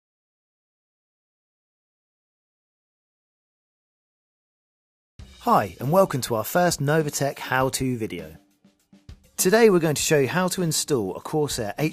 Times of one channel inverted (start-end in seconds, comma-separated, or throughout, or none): none